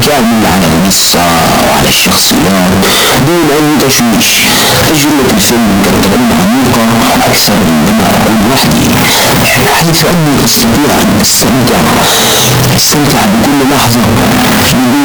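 Float read as integer runs throughout the clip. The speech has likely been stored as 32-bit float but read as 32-bit integer, so sign and exponent bits dominate each sample. The waveform turns nearly square at an almost fixed, high level: very loud and harsh, with background noise as loud as the voice, yet pitch stays traceable.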